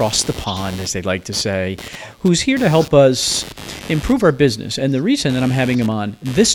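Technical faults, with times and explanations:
Throughout, computer activity noise: computer load swings disturb the shared audio ground, adding a chirping buzz near 100 pulses a second, roughly 20 dB under the speech.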